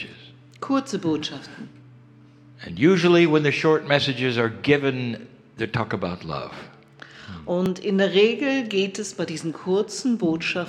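At 7.66 s the audio jumps forward. About 10 ms is missing. This is likely a dropped buffer (overrun), joining the two sides directly.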